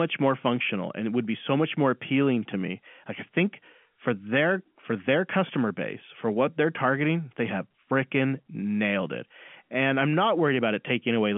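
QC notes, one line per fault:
Nothing stood out on listening to this telephone-band speech, which carries the narrow 150 Hz to 3.4 kHz line band of G.711 telephone coding.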